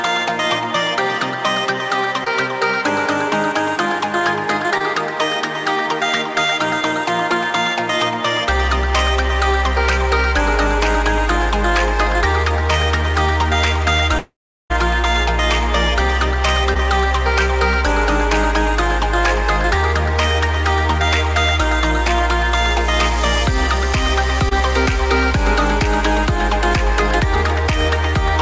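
Short concealed packet loss appears at 2.24 to 2.28 s and 4.78 to 4.82 s. About 20 ms never arrived, and the gap was bridged by extending the previous sound. Each leaves a brief smear or wobble.

From 14.18 to 14.72 s the sound continues as a fading buzz. It then goes silent for about a third of a second before resuming with material missing. This is likely a long network dropout.

Two more short concealed packet losses, each again about 20 ms, fall at 16.74 to 16.77 s and 24.49 to 24.53 s. Through the G.722 call path, nothing is heard above 8 kHz.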